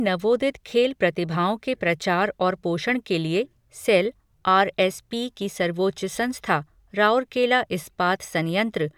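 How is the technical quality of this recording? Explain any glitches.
The recording is technically sound, with no glitches or faults to be heard anywhere in the speech.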